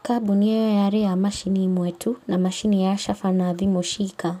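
Faint echo leak in this speech clip at 1.44–1.53 s, 1.9–1.99 s, 2.2–2.27 s and 3.99–4.17 s: short, very quiet scraps of the voice returning 444 ms late, roughly 35 to 40 dB down. Likely a far-end loudspeaker's echo canceller leaving residual pickup unremoved.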